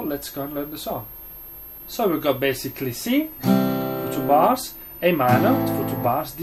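Switching supply whistle runs throughout the clip: a steady high tone sits under the sound, its pitch wandering between about 12.7 and 13.2 kHz, at roughly 20 dB below the wanted signal. A switching power supply somewhere in the chain is cycling at an audible rate, either in a burst mode or beating against another supply, and that switching frequency leaks into the audio path as a whistle whose pitch moves within that narrow band.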